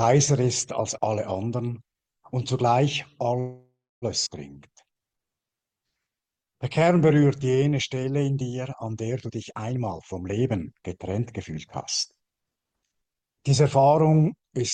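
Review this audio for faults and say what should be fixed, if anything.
Call audio freeze, 3.39 to 4.05 s: the last sound carries on as a fading buzz and then about 0.3 s of silence, likely packets held up in transit while the jitter buffer ran empty, so the audio resumes late with nothing lost.

Skip ahead, 4.26 to 4.29 s: roughly 0.4 s of sound is dropped and the two sides are joined almost directly, as queued audio is lost in transit or discarded by an overflowing buffer, recovering the delay.

Jitter buffer slow-down, 4.53 to 8.01 s: repeated pitch periods stretch the audio to 88% speed at unchanged pitch, adding 441 ms to rebuild a reserve.

Jitter buffer speed-up, 9.27 to 11.59 s at 120% speed, then 12.16 to 13.23 s at 112%: short pitch-period pieces are cut, removing about half a second and then about 0.15 s, so the sound runs hurried at unchanged pitch.

Stabilise the network path to cut packet delay variation, and tune the jitter buffer's target delay and adaptation rate so it does not swing between starving and overflowing.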